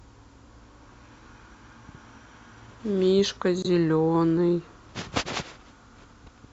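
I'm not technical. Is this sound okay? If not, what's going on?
No. At 3.62 to 3.66 seconds the speech drops out into a sudden, very brief silence, about 0.03 seconds, then carries on without losing its place. This is a corrupt frame muted: one chunk of compressed audio was damaged, the player rejected it, and it filled the gap with silence.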